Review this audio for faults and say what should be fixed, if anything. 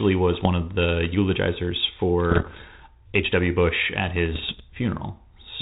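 Bit errors on an ADPCM link cause pops and rough bursts at 0.33–0.47 s, 2.30–2.63 s and 4.33–4.61 s. Each flipped bit derails the decoder's predictor and step size. The middle burst sounds heaviest. Stronger error protection or a cleaner radio link would prevent this.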